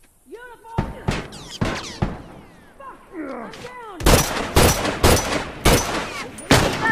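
Between 3.86 and 4.43 s there are scattered short gaps: about four packets were lost or arrived late, and the receiver concealed each hole by extending the preceding sound. Each patch lasts no more than roughly 15 ms, heard as brief ticks and smears.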